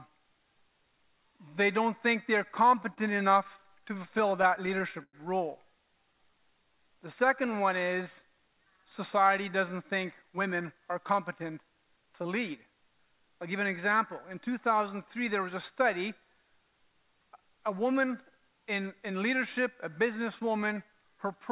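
From 2.7 to 5.15 s, repeated stalls (stutter) occur: late packets emptied the jitter buffer 18 times, and the receiver stretched the last sound over 290 ms in total, each gap up to 100 ms. The audio drags and stutters.

From 6.14 to 8.04 s, a jitter buffer slow-down rebuilds the receiver's reserve by repeating pitch periods. This adds 159 ms, so the audio runs at 92% speed and sounds drawn out at unchanged pitch.

From 10.23 to 13.92 s, a jitter buffer speed-up sheds excess delay by cutting short pieces, about a third of a second in total. The audio runs at 107% speed and sounds hurried at the same pitch.

Throughout, nothing is heard above 4 kHz, which fits a G.711 A-law call path.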